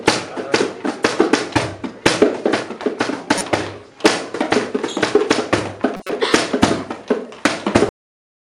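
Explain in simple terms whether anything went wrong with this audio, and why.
A short chirpy burst of noise at 3.38 to 3.44 s, and a louder, longer one at 5.97 to 6.13 s, are each a corrupt frame decoded: damaged compressed data was played anyway, spraying sound at wrong frequencies.

At 7.89 s the audio stops dead mid-sound, dropping straight to silence. This is a cut-off end: the final stretch was never written or played.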